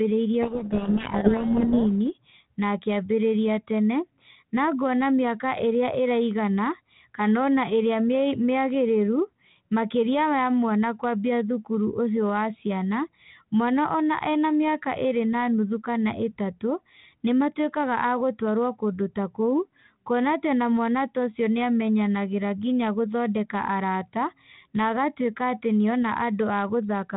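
From 0.42 to 1.87 s there's a codec payload misread: the decoder takes the G.726 code words in the wrong bit order, burying the speech in harsh distortion.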